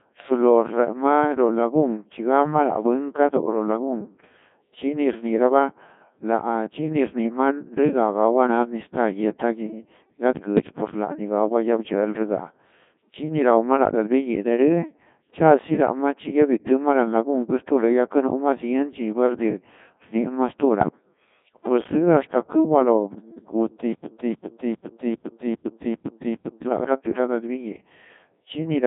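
Codec 2 vocoder damage runs through the whole speech clip. The voice is rebuilt from sine waves using only pitch, voicing, energy and a spectral envelope, so it sounds robotic and buzzy. The sound sits in a 150 Hz to 3.6 kHz line band with nothing above 3.8 kHz, and the heavy degradation fits the 1.6 kbit/s mode. A stutter with silent gaps runs from 23.93 to 26.67 s. A 288 ms fragment repeats seven times, each followed by about 114 ms of digital silence, giving a steady 402 ms cycle. The audio that should have played there is lost, most likely because the stream stalled and replayed its last buffer on each retry.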